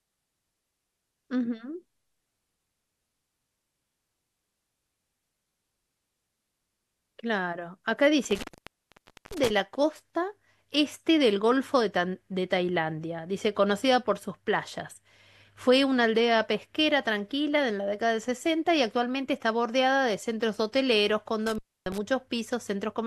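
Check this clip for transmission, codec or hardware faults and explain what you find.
One hardware fault occurs twice: an intermittent contact, where a loose cable or plug briefly opens the signal path. From 8.24 to 9.50 s the line drops out for about 0.89 s, and from 21.47 to 21.98 s for about 0.28 s. Each time the speech cuts away with crackle at the edges and faint hiss during the gap.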